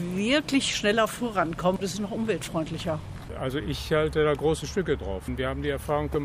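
Nothing technically wrong can be heard in this audio. There is no fault anywhere in it to time or trace to a cause.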